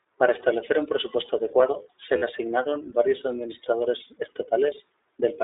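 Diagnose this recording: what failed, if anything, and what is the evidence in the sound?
At the codec stage, the speech passed through the iLBC codec, which fits its 15.2 kbps mode. Band-limited to 300 Hz–3.7 kHz, it sounds plainly rough and synthetic throughout.

At the network stage, lost iLBC frames, about 40 ms or two 20 ms frames, were concealed from 2.18 to 2.24 s, leaving a brief buzzy held vowel before immediate recovery.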